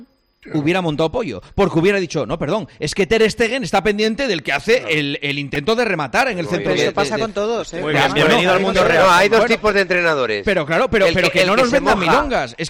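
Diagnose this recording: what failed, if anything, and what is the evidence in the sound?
Hard clipping runs through the whole recording, at the converter or a gain stage ahead of it. The signal is driven about 10 dB past full scale, so a few percent of samples are sliced flat, and the squared-off peaks add high harmonics heard as harsh fuzz on loud passages.

A repeated buffer at 5.55 s points to the driver or buffer stage. Fresh audio arrived late, so a 1.33 ms block, which fits a 64-sample buffer, played four extra times with hard joins, covering about 5 ms and heard as a brief click-buzz.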